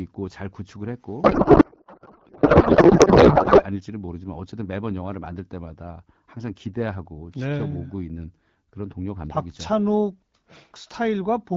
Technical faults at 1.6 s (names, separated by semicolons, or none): codec payload misread; audio dropout to a faint residue